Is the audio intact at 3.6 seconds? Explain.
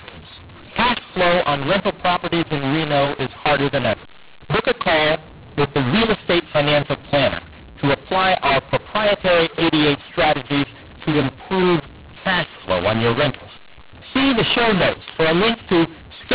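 No. At 3.6 seconds, as throughout, mu-law and A-law are mixed up. Speech coded as mu-law is decoded as A-law. Levels scramble, so the sound is harsh and distorted, and pauses fill with noise.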